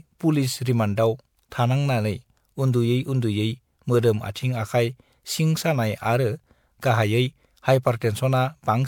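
Throughout the speech, generation loss sounds swirly, hollow and smeared, with blurred attacks. Likely cause: about five passes of MP3 encoding at 128 kbit/s.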